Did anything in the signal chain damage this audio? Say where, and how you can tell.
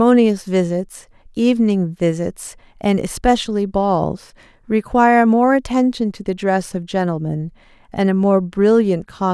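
No, nothing in this speech recording stood out on listening as damage from any stage of the signal chain.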